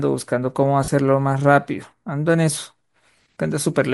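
Throughout, the speech carries a plainly audible breathy, grainy edge, with the upper spectrum sounding sparse and filled with hiss rather than crisp detail. This is likely Bluetooth LC3 compression, consistent with about 48 kbps in 10 ms frames. Unlike simple low-pass filtering, the top band is noise-filled rather than silent.

From 0.84 to 0.88 s, about 40 ms, there are lost LE Audio frames, which fits four missing 10 ms frames. The decoder repeats the last spectrum with scrambled phase, so the speech turns into a brief noisy smear instead of dropping to a clean silent gap or click.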